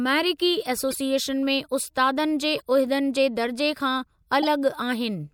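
At 0.89–0.96 s, 2.58–2.62 s and 4.41–4.49 s, a corrupt frame decoded yields a brief chirp, squeak, blip or noise burst in the speech. Damaged frames were played anyway, misplacing energy. The last burst is loudest, the middle one faintest.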